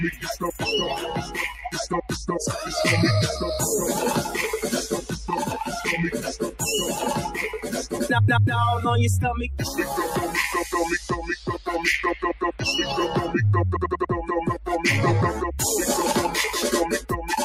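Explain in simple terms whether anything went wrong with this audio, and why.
Something did go wrong: a noise suppressor designed for speech was left running on this sound, and it is treating steady tones, room ambience and lingering reverb as unwanted background. Throughout the clip it keeps pushing those parts down, then letting them back up, so the level swings noticeably. Sharp beginnings of sounds slip through, but anything held or fading gets thinned out, giving a pumping, fluttering quality.

At certain moments the suppressor goes further, and you hear sound cut by the noise suppressor. A sustained or decaying part suddenly sinks, or its tail is chopped off early, while abrupt sounds mostly come through. This happens at about 0.11 to 0.62 seconds, 1.21 to 1.7, 2.02 to 2.28, 5.01 to 5.29, 10.98 to 11.67, 12.14 to 12.62 and 17.0 to 17.26. The dips near the start, around 12.1 seconds and at the very end are the deepest.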